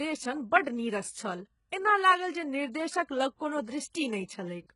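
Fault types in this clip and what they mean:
HE-AAC compression: The speech was likely squeezed through an HE-AAC encoder at a very low rate, consistent with roughly 12 kbps, which codes only the lower band and synthesizes the treble by copying lower bands upward under a coarse envelope. Heavy damage results: the top end sounds artificial, s sounds come out gritty and lispy, harmonics fail to align across the crossover, and nothing survives above about 11.1 kHz.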